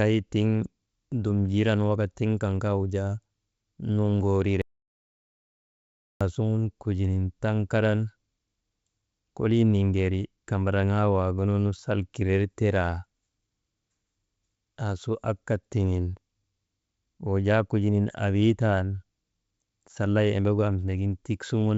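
Clock drift between sender and receiver runs through the whole clip: the sending side's clock is around five percent fast, so the receiver's jitter buffer keeps overfilling. Over this G.722 call path, which fits a 64 kbps link and carries nothing above 8 kHz, the speech ends up paced slightly unevenly from start to finish.

Repeated timing corrections follow from that drift, from 0.15 s to 21.63 s. The receiver keeps trimming small pieces to catch up, which speeds the speech to about 104 percent. These uneven cuts come across as faint hiccups and a subtly restless tempo.

An audio dropout to silence runs from 4.62 s to 6.21 s. The input was likely lost through a disconnect or mute while writing continued, so about 1.59 s of speech vanishes. The sound stops abruptly into silence with no room tone, then resumes mid-flow.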